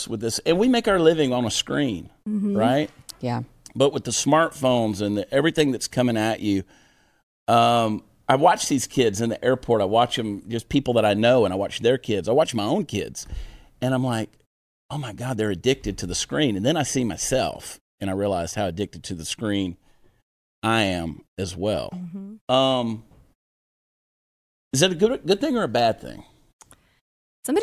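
Nothing stood out as a technical fault on listening to this speech recording.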